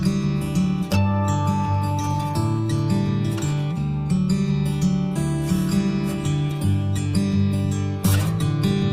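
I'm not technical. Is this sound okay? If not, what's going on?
Yes, this sound is fine. Nothing in it points to a technical problem that needs fixing.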